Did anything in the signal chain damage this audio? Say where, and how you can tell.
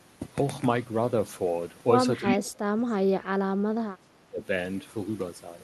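Yes. Speech suppressed in double talk occurs from 2.21 to 3.47 s and again from 3.69 to 4.43 s, at the call-processing stage. In each stretch the speech sags by as much as about 30 dB, affecting roughly a second and a half in the first window and about 0.7 s in the second. The likely cause is the echo canceller failing to separate the near talker from loudspeaker echo while both sides spoke, so it attenuated everything.

An echo leak appears at 2.27 to 2.35 s, also in call processing. A brief delayed copy of the speech, lagging 342 ms behind the original, comes through at about the same loudness as the direct speech. It is heard as a short scrap rather than a sustained echo. This most likely comes from a loudspeaker whose echo canceller let part of its microphone pickup return down the line, all within the band-limited, roughly 12 kHz call audio.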